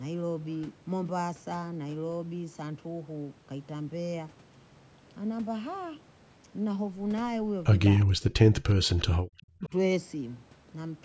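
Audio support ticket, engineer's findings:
Echo leak. Far-end echo canceller likely passing residual loudspeaker pickup back down the line. Audible as faint delayed copies of the talker, about 360 ms late, roughly 25 to 35 dB under the direct speech. Short scraps at 8.00–8.05 s, 8.98–9.05 s and 9.38–9.42 s, clustered around the double-talk section rather than continuous.

Speech suppressed in double talk. Echo canceller likely unable to separate near-end talker from echo while both sides speak, so it attenuates everything. Talker level collapses, around 40 dB at the deepest, across 8.06–8.97 s (some 0.7 s affected), then again 9.33–9.72 s, around 35 dB down for about 0.4 s. Heard as speech chopping out in pieces.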